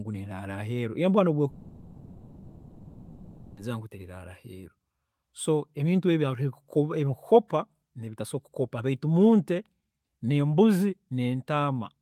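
At 1.49 s the speech breaks off and, for about 2.1 s until 3.62 s, the last sound is stretched into a fading buzz. That's most likely a long network dropout, with the receiver papering over missing audio before speech resumes, minus what was lost.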